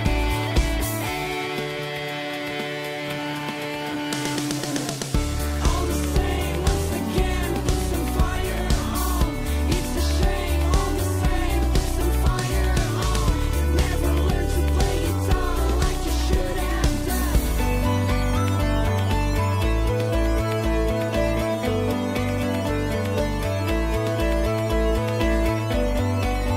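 No technical faults can be heard anywhere in the recording.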